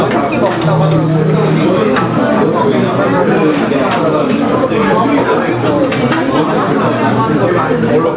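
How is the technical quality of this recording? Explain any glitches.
The recording has one fault, heard throughout, in a call-style path with nothing above 4 kHz, which points to a narrowband codec such as G.711.

Gain pumping runs through the whole clip. The gain dips by about 5 dB whenever a loud sound arrives, squashing the level differences. This is likely from the input gain being set far too high, so a fast limiter or compressor keeps pulling it down on each peak.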